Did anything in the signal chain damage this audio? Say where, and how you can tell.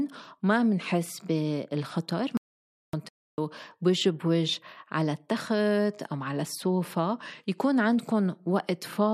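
Yes. At the capture or interface stage, the input signal was most likely lost for a moment, through a dropped device connection, a failed link or a stray mute, while the recorder kept writing silence. This audio dropout to silence runs from 2.37 s to 2.93 s, about 0.56 s. The speech cuts off mid-flow and the gap is dead silence with no room tone at all, and whatever was said during it is gone.

The second fault, a playback stall, sits at the playback stage. The player most likely ran short of buffered data or had its output thread blocked, so it emitted nothing until it caught up. The speech halts abruptly from 3.09 s to 3.38 s, about 0.29 s, with complete silence across the pause, then resumes. This gap is shorter than the earlier dropout and follows it by only about 0.15 s.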